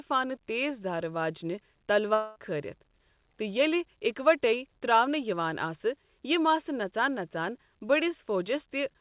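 At 2.14 s the speech breaks off. Until 2.38 s it is replaced by a buzzy continuation of the last sound that fades, and then the speech resumes with about 0.22 s of audio simply gone. A long network dropout is the likely cause, with the receiver stretching the final fragment forward to cover the gap. On a spectrogram, already empty above 4 kHz from the G.711 call path, the stretch shows repeated, smeared harmonic bands thinning out. The waveform shows a decaying periodic pattern.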